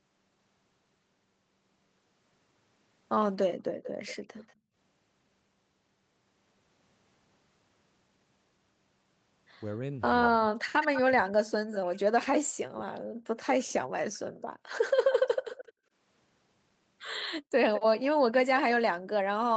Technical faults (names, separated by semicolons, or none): background gated by the echo canceller; echo leak; speech suppressed in double talk